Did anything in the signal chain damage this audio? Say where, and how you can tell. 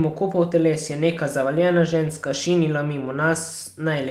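No, nothing in this speech recording points to damage at any stage of the chain.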